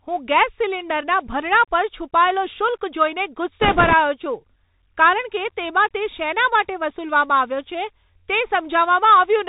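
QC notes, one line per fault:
Throughout: Bluetooth CVSD headset codec. The speech is band-limited, with nothing above 4 kHz. The sound fits a 64 kbit/s stream of one-bit steps that only say up or down. The step size adapts but cannot keep up with loud, bright sounds, so they smear and distort. S sounds come out scratchy. A fine granular hiss sits under the speech, and the damage is plainly audible.
3.62 to 3.94 s: bit errors on a Bluetooth voice link. For about a third of a second the speech is overlaid with a rushing, crackly noise. The density points to a few percent of bits flipped. Each bit in this codec only nudges the signal slightly, and the error fades as the step adapts. So there are no sharp clicks, only a gritty wash that clears once the errors stop.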